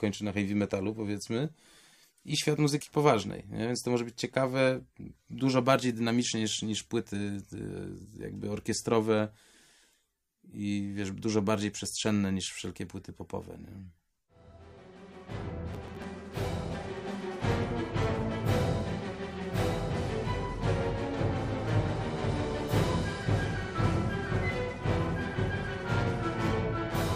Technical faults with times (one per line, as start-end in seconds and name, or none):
15.73-16.19 processor overload crackle